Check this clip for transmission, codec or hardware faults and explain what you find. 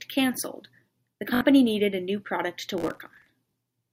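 Two kinds of fault are present: Bluetooth stutter twice and one burst of processor overload crackle.

Bluetooth stutter occurs from 1.35 to 1.41 s, right after "cancelled the" and before "needed a new product", and again briefly at 3.51 s. When packets failed to arrive, the receiver kept replaying its last short slice, giving a brief buzzing repeat. The first gap covers about 61 ms, which fits roughly three lost packets. The second covers about 20 ms, consistent with a single packet. Afterwards the speech picks up further along, as though it had kept running. The repeat of one slice followed by a jump forward sets it apart from crackle.

Processor overload crackle runs from 2.78 to 3.29 s, following "a new product to". The processor couldn't finish its audio buffers on time, missing dozens in a row. The sound points to very short buffers of around a millisecond and a half. Each miss put a fragment of old audio with hard edges into the stream. 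Together these form a gritty tearing laid over the speech for about half a second. Unlike the stutter, there is no single repeated slice or forward jump, only dense, continuous roughness until the load eases.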